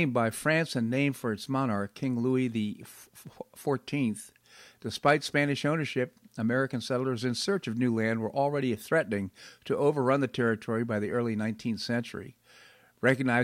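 No technical faults are audible.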